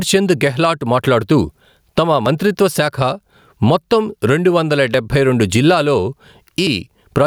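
A speech clip with gain pumping throughout: the level is pulled down by around 15 dB under each loud syllable, likely from excessive input gain feeding a fast limiter. The waveform looks flattened.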